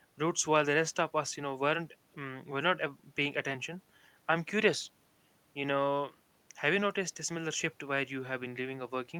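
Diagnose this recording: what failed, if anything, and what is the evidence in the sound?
Nothing in this speech recording stood out as a fault on listening, so there is no failed stage to point to.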